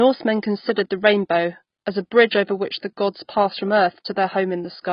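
Throughout the speech, nothing reaches above 5.1 kHz, and the sound is dull and smeared, with a warbling, fizzy texture on sibilants. This is AAC compression, likely AAC-LC at a low rate that fits a bitrate around 16 kbps, where coarse quantisation and a lowered cut-off cause heavy damage.

From 2.79 to 2.83 s, a short hiss runs ahead of a sharp attack, which then sounds softened. This is pre-echo: the codec spreads quantisation noise sized for the loud onset across its whole block, so about 34 ms of noise fills the quiet gap before it.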